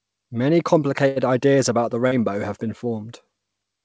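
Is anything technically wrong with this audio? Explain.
Yes, there are two packet-loss faults.

From 1.08 to 1.19 s, just before "ideas about the", a burst of packet loss: the last sound is extended and turned down as it goes on, then skips ahead. The spectrogram shows the last sound smeared and decaying.

From 2.08 to 2.14 s, between "ideas about the" and "have been", a short concealed packet loss: about 33 ms was patched with extrapolated sound, giving a brief smear. The waveform shows a small, soft discontinuity.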